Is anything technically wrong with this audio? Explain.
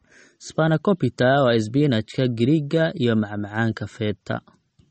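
Yes. Throughout, the speech carries likely MP3 compression at a starved bitrate, around 34 kbps: the treble is cut off above 8.4 kHz and weak detail flickers, giving plainly audible watery, swirly artefacts.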